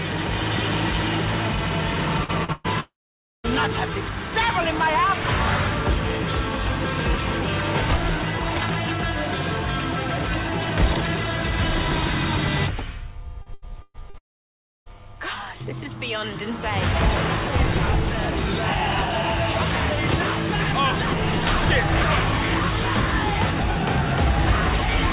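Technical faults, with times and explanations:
2.24–2.31 s and 2.44–2.51 s, short concealed packet loss: two brief smears, each about 40 ms long, where the sound briefly blurs. Each time a packet arrived too late to decode, and the receiver bridged the hole by extending the preceding sound before blending back in.
2.52–2.67 s, burst of packet loss: a held, fading smear lasting about 0.12 s, with no silence in it. Several packets in a row went missing, so the receiver kept extending the last sound while lowering it, and the sound resumes with that stretch gone.
2.80–3.47 s, long network dropout: a short fading tail gives way to about 0.52 s of silence before the sound returns further on. The likely cause is that nothing arrived for about 0.64 s. The receiver continued the last sound briefly, then had nothing left to fill with.
13.42–14.17 s, repeated packet loss (robotic sound): choppy sound with pieces missing. 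Four separate gaps, the longest about 0.12 s, were each patched by extending the preceding sound. Together they cover about 37% of this span.
14.18–14.89 s, long network dropout: right after the choppy stretch, the sound drops to about 0.65 s of silence after only a trace of fill. A gap of about 0.68 s with no arriving audio is the likely cause, leaving the receiver nothing to conceal with.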